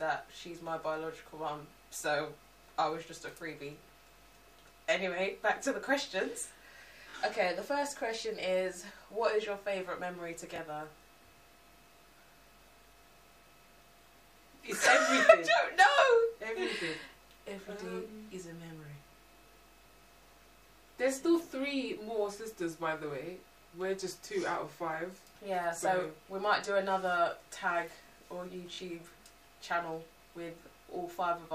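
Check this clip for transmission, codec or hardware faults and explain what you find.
Three brief stutters, all repeated buffer faults. At 7.10 to 7.14 s and again at 28.74 to 28.78 s, one tiny slice of sound plays three times in a row. At 10.56 to 10.58 s a slice plays twice. Each repeat joins with a hard edge, so it comes across as a quick click or buzz. The repeat length fits a 20 ms buffer. When fresh audio arrives late, the device replays its last buffer, and roughly 40 ms of sound is skipped at the longer events.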